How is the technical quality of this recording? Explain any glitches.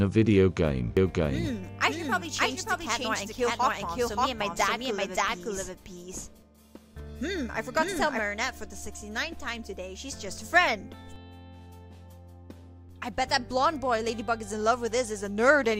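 There's one real problem here. From 0.97 to 8.19 s you get a doubled audio track: a second, equally loud copy trails about half a second behind. It's likely a slower capture path recording everything twice, and it cuts in and out abruptly with no room tail.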